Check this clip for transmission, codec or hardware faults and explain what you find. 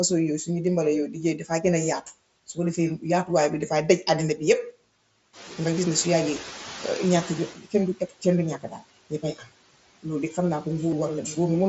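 Several faults are audible in the speech, all tied to noise suppression and the Bluetooth headset link.

Noise suppressor artifacts run through the whole clip. The background sinks between phrases and swells back under them. The suppressor cuts what it judges to be steady noise by about 17 dB, band by band and frame by frame, so the floor pumps with the speech.

Speech cut by the noise suppressor appears at 1.13–1.64 s, 7.52–7.74 s, 7.96–8.25 s, 8.58–8.91 s and 9.1–9.48 s. Quiet sounds and endings go faint or swallowed, dropping by about 12 to 18 dB over a fifth of a second or less each time. The suppressor mistook these low-level parts of the speech for noise and turned them down with it.

The noise suppressor is catching up from 5.33 to 7.54 s. Right after the room noise jumps by about 10 dB near 5.5 s, more noise gets through, then it settles lower over about 2.2 s. The noise estimate lagged the sudden rise, reducing it by only about 11 dB at first.

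Concealed Bluetooth headset packet loss occurs at 5.47 s, 6.83 s and 10.91 s. The first two are single losses, nearly hidden. Lost headset packets, 7.5 ms at the first two and 15 ms at the last, were covered by repeating a matching stretch of the preceding waveform. The mSBC link underneath adds only light graininess, which fits a rate near 60 kbps.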